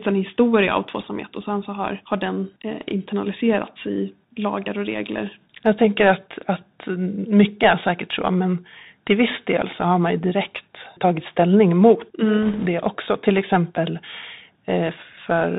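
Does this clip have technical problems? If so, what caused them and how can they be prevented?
Yes. Throughout the speech there is plainly audible damage from the Bluetooth CVSD headset codec, and the sound fits a 64 kbit/s CVSD link. CVSD sends one bit per sample, telling the decoder only to step up or down, with the step size adapting as it goes. Nothing above 4 kHz survives, so the speech sounds narrow and muffled. Fast, loud high-frequency content outruns the step, giving scratchy s sounds, and a granular hiss sits under everything. Prevention: use a wideband headset profile (mSBC or LC3) or a wired or USB microphone instead of the narrowband CVSD path.

From 12.42 to 12.67 s, right after "direkt tagit ställning mot", bit errors on the Bluetooth voice link add a brief rushing, crackly noise over the speech. The error rate appears to be around 2 percent. Because every CVSD bit carries the same small weight and the decoder's step adaptation lets each error fade, the flipped bits produce no loud clicks. 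Instead they smear into that short burst of crackle. Prevention: keep the headset close to the host with a clear line of sight, and reduce 2.4 GHz interference from Wi-Fi and other radios.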